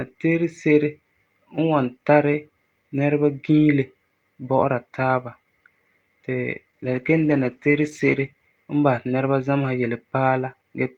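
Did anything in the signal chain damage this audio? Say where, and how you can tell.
Yes. A call bitrate drop hits the codec stage from 6.71 to 8.35 s, just before "n basɛ ti nɛreba". The speech turns rough and muffled, with its top end gone for about 1.6 s. That fits the encoder falling from 48 to 15 kbps.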